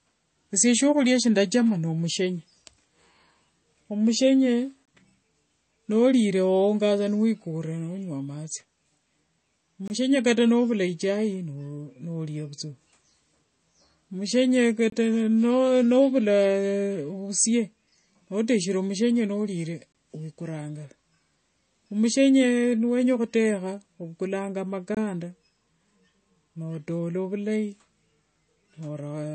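Speech with a hard treble ceiling at 8.3 kHz and a watery, swirling texture on sibilants throughout, a pattern that points to likely MP3 compression at a low bitrate near 32 kbps. It differs from a plain low-pass filter because of that swirl. A gap between chunks opens for about 23 ms at 4.85, 9.88, 14.90, 19.92 and 24.95 s, the last just after "niwenya khutekha ovukulanga". These are short holes about 5 s apart with no sound missing, unlike random dropouts.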